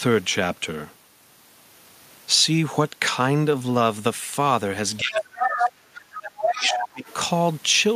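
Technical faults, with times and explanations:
4.97–5.21 s, 5.39–5.71 s, 6.13–6.21 s, 6.41–6.88 s and 7.06–7.14 s, other side's voice leaking through: the echo canceller likely left part of the loudspeaker signal in the microphone feed, so scraps of a second voice surface, roughly as loud as the talker around 5.4 s and barely audible near 7.1 s.
4.99–7.07 s, speech suppressed in double talk: with both sides talking at once, the echo canceller likely could not tell the talker from the echo and turned everything down, so the talker's voice dips by as much as about 20 dB across roughly two seconds.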